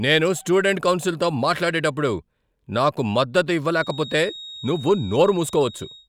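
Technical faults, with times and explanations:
3.66 to 6.08 s, feedback whistle: a thin, steady 3.8 kHz whistle appears behind the speech and lasts to the end, about 20 dB below it and swelling and fading slowly in level. The likely cause is a loudspeaker-to-microphone loop poised just short of runaway feedback, sustaining that single frequency.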